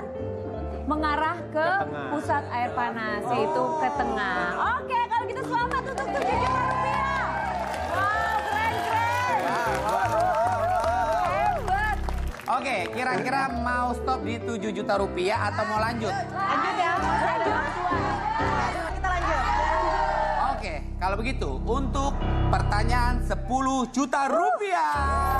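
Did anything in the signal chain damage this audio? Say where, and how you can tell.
No, nothing along the chain has audibly damaged this signal, and there is no sign of breakage, level disruption or timing trouble at any stage.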